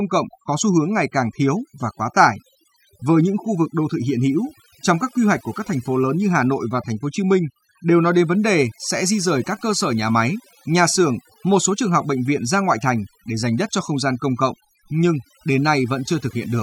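Overdone noise removal runs through the whole recording: bands near the estimated noise floor are pushed almost to nothing, taking quiet parts of the voice along. The background becomes near silence dotted with twinkling specks, unlike a constant hiss or an evenly dulled tone.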